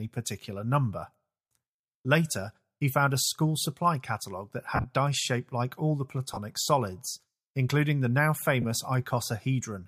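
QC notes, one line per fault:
4.76–4.86 s, 6.34–6.37 s and 8.62–8.65 s, lost LE Audio frames: after "school supply catalogue that", about 70 ms goes missing across 80 ms, with the longest run around 40 ms. A further 30 ms is lost before "solids including the now", and 20 ms after "solids including the now". Each gap sounds like a noisy smear rather than a dead silence, because the decoder keeps refilling it from the last good spectrum with scrambled phase. The steps fit 10 ms frames, likely LC3.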